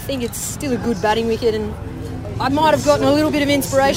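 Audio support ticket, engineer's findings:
Crude rate conversion, present throughout the clip. Gritty, inharmonic fizz riding on louder and brighter passages, roughly 25 dB below the signal. Probable component: resampler converting 44.1 kHz to 48 kHz by nearest-sample repetition, no interpolation or anti-imaging filter. The periodic duplicated-sample pattern set by the two rates produces shifted, inharmonic copies of the content.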